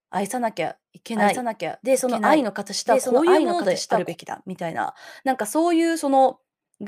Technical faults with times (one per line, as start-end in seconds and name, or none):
1.16-4.14 doubled audio track